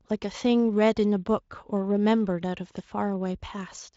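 Nothing technically wrong turns up in this bit of speech, and the Speex coding it went through leaves at most a faint trace.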